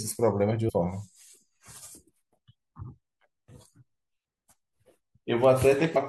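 Compressed frames skipped at 0.68–0.70 s and 5.95 s: the decoder dropped about ten 21.3 ms frames each time, so the speech jumps ahead roughly a fifth of a second.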